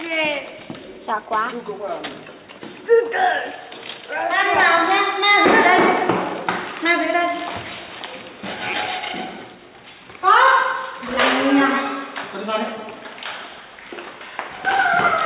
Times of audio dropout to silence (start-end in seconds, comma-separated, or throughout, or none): none